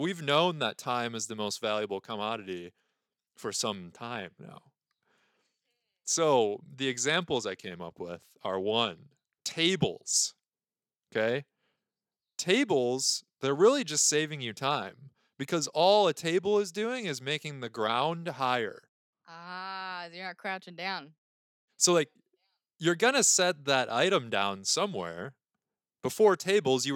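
No technical faults can be heard in this speech recording. Nothing in the audio at any point calls for attention.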